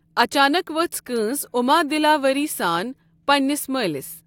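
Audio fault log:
Nothing in the speech stood out as a fault on listening.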